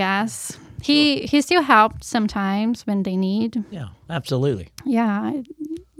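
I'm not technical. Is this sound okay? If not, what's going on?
Yes, this speech recording is technically fine, with no faults anywhere in the signal.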